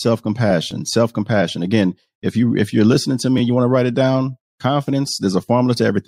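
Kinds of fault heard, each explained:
Repeated buffer: late audio makes the device replay its last block, which fits a 10 ms buffer, so the speech gives short buzzy clicks at 0.71 s, 3.38 to 3.40 s (played twice more) and 5.08 s. Unlike a dropout, nothing goes silent or missing.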